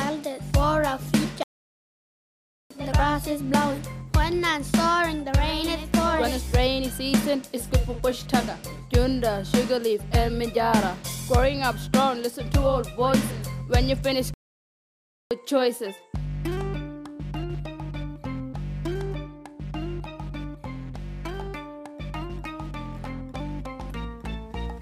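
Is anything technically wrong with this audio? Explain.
Yes, there are two playback stalls, from 1.43 to 2.71 s (about 1.27 s) and from 14.34 to 15.31 s (about 0.97 s). The sound cuts out mid-flow and then resumes, likely because the player ran out of data. Each stall appears as a flat waveform and an empty vertical band on a spectrogram.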